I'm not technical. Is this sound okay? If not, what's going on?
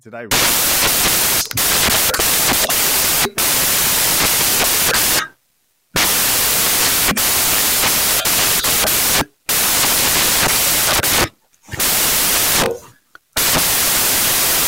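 No, it isn't. From about 0.31 s to the end, the speech turns into loud hiss, a case of samples built from the wrong bytes. The player is piecing each sample together wrongly, so the tiny jittery details come out huge.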